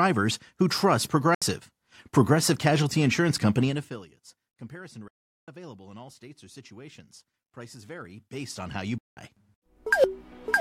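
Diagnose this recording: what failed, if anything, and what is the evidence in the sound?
The sound cuts to silence at 1.35–1.42 s (about 70 ms), 5.08–5.48 s (about 0.39 s) and 8.98–9.17 s (about 0.19 s), then resumes as if it had kept playing. That's likely a Bluetooth dropout: late packets on the wireless link got discarded.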